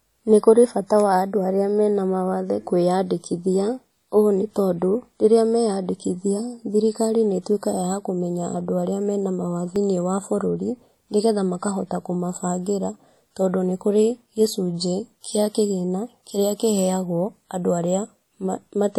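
From the start the speech sounds washy and ringing, with a hiss that swells and fades with the voice and no content above 20.1 kHz. The likely cause is WMA compression. Long transform blocks smear quantisation noise across tens of milliseconds, and the plainly audible damage fits a bitrate around 48 kbps.

At 9.76 s, just after "kũmenya andũ arĩa mena", a mute of a couple of milliseconds interrupts the sound, and it resumes at "wa bũrũri nĩgetha makahota". This is a CD skip: the laser jumped to another turn of the disc's spiral and playback continued from a different place.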